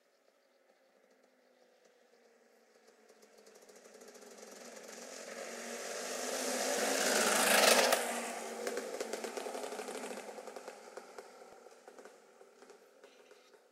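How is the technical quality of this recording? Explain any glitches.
There's one glitch worth flagging, at about 11.53 s, where the sound jumps forward very briefly instead of flowing continuously. That's most likely a dropped buffer (overrun): the recording software didn't collect a block of samples before the hardware wrote over it, so that sliver is lost and the audio on either side is joined directly. Nothing is silent there; the sound simply skips ahead, and the missing piece is only around a millisecond and a half.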